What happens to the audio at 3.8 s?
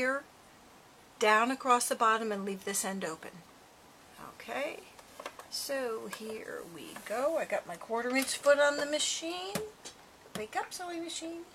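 Nothing goes wrong at 3.8 s; the audio plays through that moment intact, with no dropout, click or distortion.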